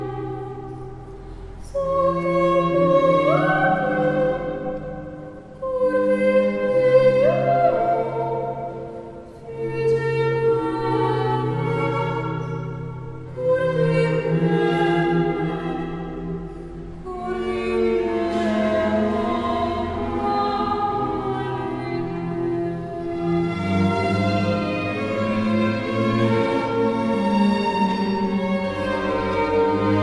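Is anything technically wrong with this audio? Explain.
No, nothing technically wrong stood out on listening to this audio.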